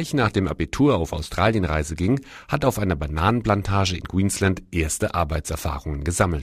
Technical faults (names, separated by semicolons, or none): none